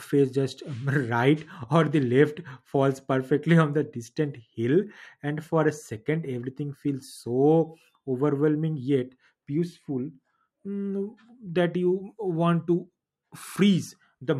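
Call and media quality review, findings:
No technical faults detected in the speech signal; levels, continuity and timing present as expected throughout.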